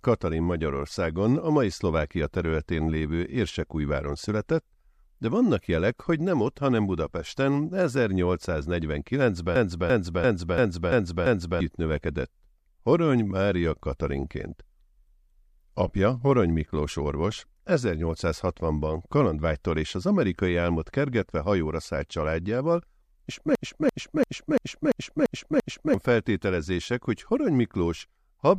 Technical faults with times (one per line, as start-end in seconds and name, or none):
9.56-11.61 system hang loop
23.55-25.94 system hang loop